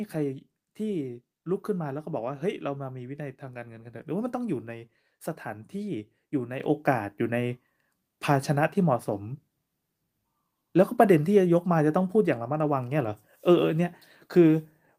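Microphone volume stepped up at 6.6 s: the call software judged the input too quiet and raised the device's microphone volume in a single jump of about 7 dB. The speech and the background noise behind it suddenly become louder together and stay at the higher level.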